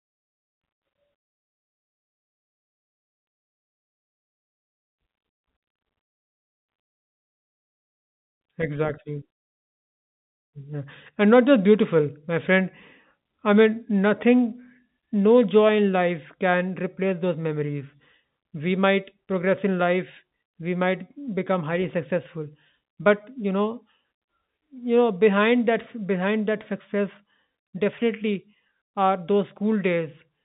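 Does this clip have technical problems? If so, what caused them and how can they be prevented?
No technical faults are audible.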